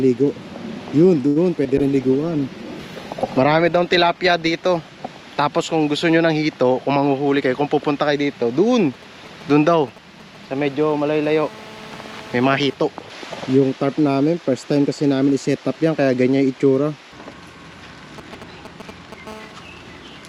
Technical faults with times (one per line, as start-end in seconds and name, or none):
1.27-1.38 short stall from a late packet
1.64-1.74 short concealed packet loss
1.78-6.73 call bitrate drop
6.89-7.42 jitter buffer speed-up
8.79-11.16 GSM signalling bursts
11.24-12.74 GSM phone buzz
18.18-19.28 GSM signalling bursts
19.28-20.29 GSM phone buzz